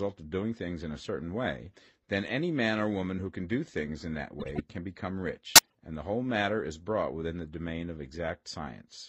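A speech clip with two runs of corrupt frames decoded: after "do things in that" (4.40 to 4.60 s) and after "can become" (5.55 to 5.74 s), damaged compressed frames play as misplaced bursts, the second louder, near -10 dBFS. Spurious energy, not silence or smoothed repetition, separates this from packet-loss concealment.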